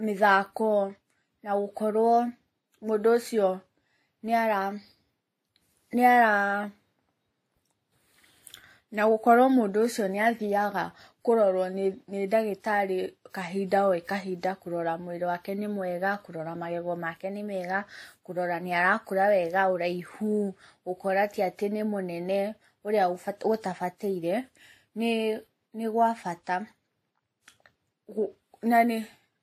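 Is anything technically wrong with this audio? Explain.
Yes. Throughout the speech there's transcoding between lossy codecs: nothing above 16.3 kHz, and two kinds of codec artefacts sitting on top of each other. That likely comes from a WMA-style encode at around 64 kbit/s re-encoded to Vorbis near 39 kbit/s, with the second codec wasting bits on the first one's damage.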